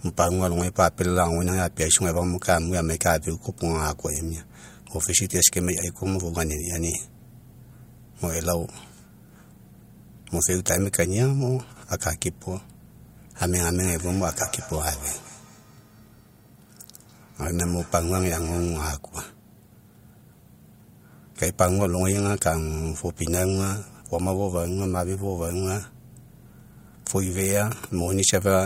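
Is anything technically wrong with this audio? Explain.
Yes. From 13.85 to 18.89 s there is feedback echo between two devices. Two devices on the same call are sharing a room, so one loudspeaker replays what the other's microphone sent, and that microphone picks it up again. Each device's echo canceller removes only its own playback, so the loop survives. The speech returns roughly a fifth of a second later, peaking at about 19 dB below the direct sound, thinner and with a ringing edge.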